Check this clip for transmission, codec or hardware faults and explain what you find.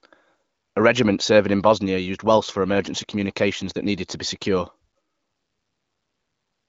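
Nothing wrong turned up anywhere in this clip.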